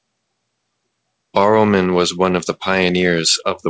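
Nothing here goes wrong technically, as the speech simply comes through a call path with its top end stopping at 8 kHz, which fits a wideband G.722 link working as it should.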